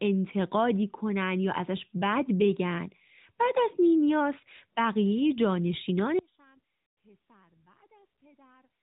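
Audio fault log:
6.19 s to end, audio dropout to a faint residue: the speech cuts off abruptly and only a faint leak remains, about 35 dB down, likely a lost signal feed with the path still live.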